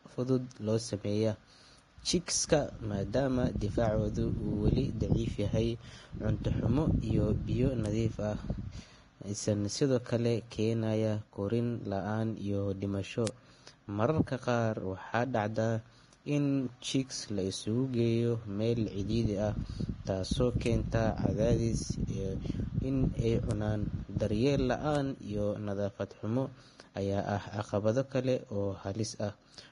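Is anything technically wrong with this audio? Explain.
Yes. The speech carries lossy-codec damage throughout, and five isolated ticks.

The whole clip has heavy Vorbis compression damage, likely from encoding at about 30 kbps. Nothing survives above 10.6 kHz. The codec describes each frame as a smooth spectral floor plus a coarsely quantised residue. At this rate the treble detail is replaced by noise of similar energy. The result is hissy, grainy sound, with roughened tones and smeared consonant onsets.

Bit error spikes occur at 7.86, 13.27, 20.66, 23.51 and 24.95 s. The one at 13.27 s follows "keenaya korriin la’aan iyo". The one at 20.66 s falls between "meel cidhiidhi ah taasoo" and "cadaadis iyo in ay". The one at 24.95 s comes just before "iyo nadaafad xumo". Each is a flipped bit in one to three samples. It throws the value off by a power of two before it snaps back. Each is heard as a single sharp, broadband tick unrelated to the speech.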